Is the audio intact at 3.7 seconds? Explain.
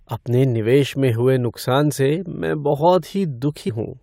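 No. At 3.68 s compressed frames are skipped. A few whole frames of the encoded speech are never played, either because they are missing or because the decoder rejected them. The sound jumps ahead by about five frames of 21.3 ms each, so roughly a tenth of a second goes missing. Unlike a dropout, there is no silent gap, just a sudden leap forward in time. The join is heard as a short smeared blip if the codec is lossy, or a hard click if it is lossless.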